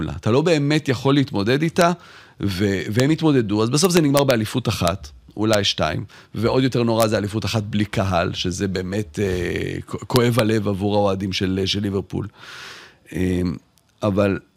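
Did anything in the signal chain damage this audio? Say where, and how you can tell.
Yes: integer overflow, at 1.81, 3.00, 3.85 to 4.31, 4.88, 5.54, 7.01 to 7.03 and 10.16 to 10.39 s. It shows up as sudden cracks on the loudest moments of the speech, sharper than clipping, with no flattening of the tops. It happened in a gain or sample-format conversion stage: the peaks reached the integer limit, about 0 dB over it, and instead of being held there they wrapped around to the opposite sign, throwing the waveform across the full range.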